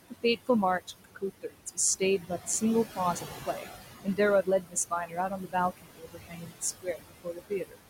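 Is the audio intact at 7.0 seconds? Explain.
No. From 6.82 to 7.8 s the speech is cut by the noise suppressor: it mistakes the quiet tail of the speech for noise and pulls it down by as much as about 22 dB, for roughly 0.7 s in all. Syllables sound swallowed and faint. Unlike a dropout, the sound thins rather than vanishing into silence.

Noise suppressor artifacts are also present throughout the clip, including at 7.0 s. The suppressor lowers the room noise, which sits about 10 dB below the speech, by about 18 dB, band by band and frame by frame. The noise sinks between the words and rises under them.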